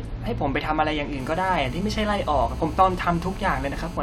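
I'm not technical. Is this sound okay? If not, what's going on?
No. From 1.20 s until 3.97 s, a hard, raspy buzz sits under the speech. This is GSM phone buzz. An older 2G mobile phone close to the recording gear was on a call, sending radio pulses about 217 times a second. The audio circuit picked those pulses up and turned them into sound, so you hear a steady 217 Hz rasp with a harsh edge. It has nothing to do with the speech itself.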